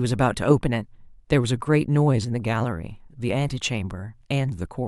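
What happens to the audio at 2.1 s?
Nothing goes wrong at 2.1 s; the speech plays through that moment intact, with no dropout, click, distortion or other fault.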